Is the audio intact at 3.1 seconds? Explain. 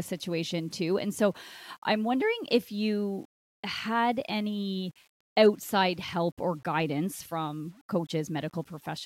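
No. At 3.1 seconds, as throughout the clip, the speech carries a grainy, gritty distortion that rises and falls with the signal, roughening quiet passages, with the error sitting roughly 35 dB below the speech. This is low bit depth without dither, likely from rounding the samples to very few levels, consistent with 8 bits. Without added dither, the rounding error tracks the waveform instead of forming a steady hiss.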